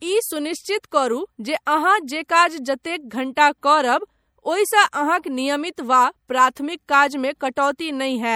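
Throughout the speech, plainly audible MP3 compression gives a watery, swirling texture as weak frequency lines drop in and out between frames, with treble gone above 20.4 kHz. This is likely a low-bitrate encode, consistent with roughly 64 kbps.

At 3.35 s and again at 6.55 s, pre-echo appears: a sharp attack lands late in a transform block, so quantisation noise spreads about 16 ms ahead of it. Each onset is preceded by a brief hiss and sounds softened.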